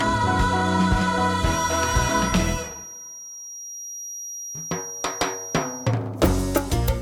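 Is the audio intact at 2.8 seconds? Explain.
No. At 2.8 seconds a feedback whistle is sounding, from 1.40 to 5.96 s. It is a thin tone at one pitch, 5.7 kHz, sitting roughly 15 dB under the sound and slowly swelling and fading. The likely cause is a loudspeaker-to-microphone loop held just at the edge of feedback.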